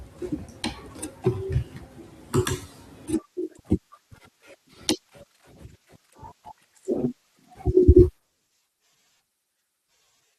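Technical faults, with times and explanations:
1.26 s, 7.57 s and 8.92 s: compressed frames skipped. At each point the speech jumps forward: about 40 ms goes missing at 1.26 s and 7.57 s, and about 100 ms at 8.92 s. That fits a couple of 21.3 ms frames being lost at the first two points and around four at the third, either absent from the file or rejected by the decoder as damaged.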